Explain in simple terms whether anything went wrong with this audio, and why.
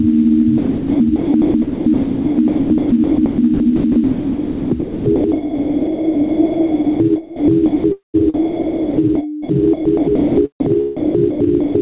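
Gain pumping runs through the whole recording: the level keeps surging and dropping as each loud sound hits, most likely from input gain set far too high and a fast limiter clamping down.

From 0.58 s to 11.75 s, the sound is chopped by the voice detector, which likely kept switching transmission off. About 7.5 seconds of real sound were swapped for synthetic comfort noise.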